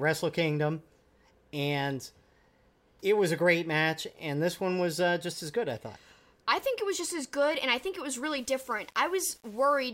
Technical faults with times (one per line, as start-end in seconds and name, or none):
8.38-9.88 low bit depth without dither